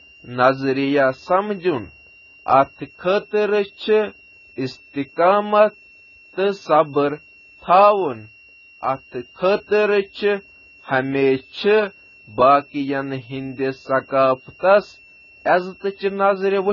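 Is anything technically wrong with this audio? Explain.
Yes, two faults run through the whole speech clip.

A switching supply whistle sits throughout: a thin tone wandering between 2.65 and 2.8 kHz, roughly 30 dB below the speech, from a power supply cycling in an audible range.

Heavy compression damage is also present throughout, likely from AAC: nothing above 7 kHz, dull and smeared consonants, and warbling sibilants. This fits a very low bitrate around 16 kbps.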